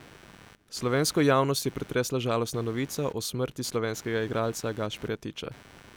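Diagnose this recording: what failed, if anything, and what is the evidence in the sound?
Analogue wiring stage: computer activity noise throughout the speech, a buzz pulsing at roughly 100 Hz around 25 dB below signal, from computer load changes disturbing the shared audio ground.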